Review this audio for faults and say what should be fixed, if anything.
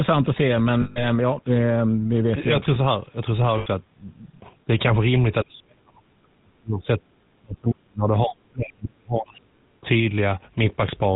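GSM full-rate codec, throughout: the voice is buzzy and gravelly with nothing above 4 kHz. This fits 13 kbps full-rate coding, which keeps only sparse pulse excitation driving a vocal-tract model. Prevent it by using a wideband codec such as AMR-WB or Opus end to end.

Lost GSM frames, 0.82–1.04 s and 3.58–3.67 s: about 140 ms and 80 ms of sound become a rough metallic ring. The last good frame is being repeated. Prevent it by improving radio link quality or adding stronger error protection and jitter buffering.

Speech suppressed in double talk, 4.67–4.72 s, 5.43–9.61 s and 9.81–9.85 s: the level dips by about 5 dB, then by roughly 40 dB for about four seconds, then by about 15 dB. The likely cause is an echo canceller muting the talker while the far side speaks. Prevent it by using a full-duplex echo canceller with proper double-talk detection instead of level-switching suppression.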